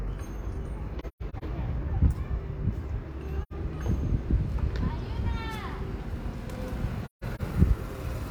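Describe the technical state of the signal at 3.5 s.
At 3.5 s you're right inside an AAC frame loss with muting, running from about 3.43 to 3.53 s. The decoder zeroed the spectrum for the missing data, roughly 85 ms of it, which fits two lost frames. Because AAC's overlapping windows still blend into the neighbouring frames, the sound fades down into a short silent gap and eases back up, leaving a soft-edged hole rather than an abrupt cut.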